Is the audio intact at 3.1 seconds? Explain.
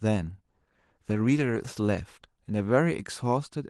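No. At 3.1 seconds you're inside a call bitrate drop that starts at 0.49 s and runs to the end. The bandwidth estimate fell, so Opus went from 64 to 14 kbps, coding the speech coarsely and trimming the highs, which makes it sound rough, watery or muffled.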